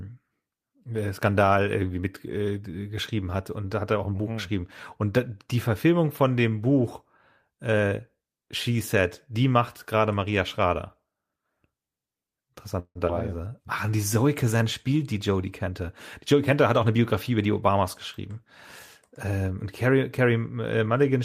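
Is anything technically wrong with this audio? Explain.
Yes. The speech has four kinds of network playback fault, all between about 12.8 and 17.8 seconds.

Call audio freeze, 12.79 to 12.98 s: the sound stalls, with the last moment stretched into a fading buzz and about 60 ms of silence before the speech picks up where it left off. The likely cause is delayed packets that let the jitter buffer run dry, so 158 ms of filler was inserted while nothing was lost.

Skip ahead, 13.07 to 13.12 s: playback jumps forward, with roughly 70 ms of speech gone and only a 14 ms bridge joining the two sides. Audio that had already queued up was discarded, which cut the delay by about 50 ms.

Jitter buffer slow-down, 13.49 to 14.15 s: the speech drags to 93% speed at unchanged pitch, with sounds drawn out. The receiver repeated individual pitch periods to add 55 ms and rebuild its reserve of buffered audio.

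Jitter buffer speed-up, 15.67 to 15.81 s and 16.33 to 17.84 s: the speech sounds hurried at the same pitch. The first burst runs at 132% and removes roughly 50 ms. The longer stretch runs at 107% and removes about 100 ms. In both, the receiver was trimming short pitch-period pieces to drain a backlog of buffered audio.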